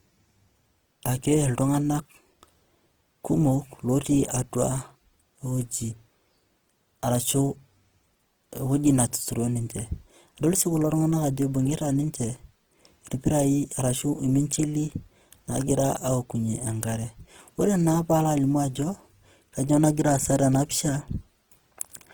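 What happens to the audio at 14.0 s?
At 14.0 s, as through the whole speech clip, the likely culprit is Opus compression in its music (CELT) mode at a starved bitrate, fitting roughly 16 kbps. Short of bits, the encoder preserves each band's overall energy but fills the detail with folded copies of lower bands or with noise. The result is plainly audible damage: rough, grainy, noisy texture in place of clean tone. The band stays fullband, reaching up to about 20.2 kHz.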